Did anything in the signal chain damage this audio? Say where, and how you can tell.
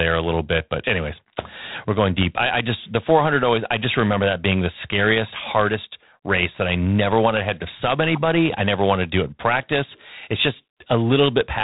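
Yes, at the codec stage: G.726 ADPCM runs through the whole clip. The speech carries a harsh, rasping hiss that rises and falls with its level, which fits 24 kbit/s coding, and nothing passes above 3.9 kHz. A plain band-limit alone would leave no hiss tracking the speech.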